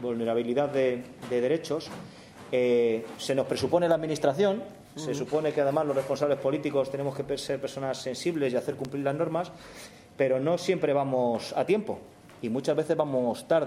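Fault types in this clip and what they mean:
Loud pop: a single sharp pop from 8.85 to 8.87 s, peaking well above the surrounding level while the sound continues underneath. It is likely a brief voltage step or pulse, from a plug, switch, static discharge or driver glitch, shaped by the following circuitry.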